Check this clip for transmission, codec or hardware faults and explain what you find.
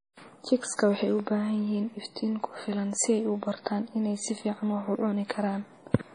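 One fault runs through the whole speech clip: the sound carries heavy damage of the kind left by MP3 compression at a low bitrate, which fits roughly 32 kbps. Nothing is present above 10.4 kHz, a hard treble cut-off. The likely cause is an MP3 encoder short of bits, discarding the top band and zeroing weak frequency lines that switch on and off between frames. The result is a watery, swirling texture, metallic chirps on s sounds and softened consonant attacks.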